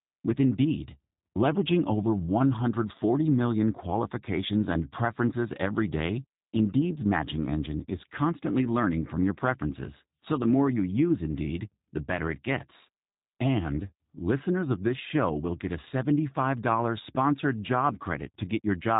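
From start to finish the speech carries G.729 codec damage, and it is plainly audible: a slightly rough, buzzy, synthetic edge, as if the voice were rebuilt rather than recorded. That is what happens when a low-rate coder models the vocal tract and pitch and then approximates the excitation with a handful of pulses. The character fits roughly 8 kbit/s. On a spectrogram everything stops sharply at about 3.8 kHz, with blurred, smeared harmonics below.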